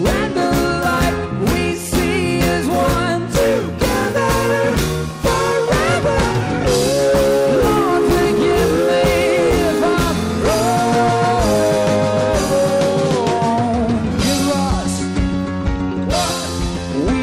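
Nothing technically wrong can be heard in this audio. No fault turns up at any point in the recording.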